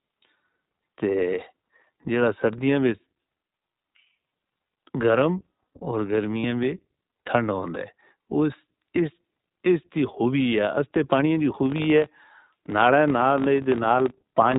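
iLBC codec throughout: narrowband coding cuts everything above 4 kHz and leaves the speech plainly rough and synthetic, which fits iLBC's 15.2 kbps mode with 20 ms frames.

Lost iLBC frames at 6.40 to 6.45 s: for about 40 ms, which fits two lost frames, the decoder repeats the last pitch cycle mixed with noise, giving a brief buzzy held vowel before the speech recovers at once.

Filter restarted on every block from 11.66 s to the end: the filter starts each block from silence, so each block begins with a transient, producing a 50 Hz buzz that follows the speech level.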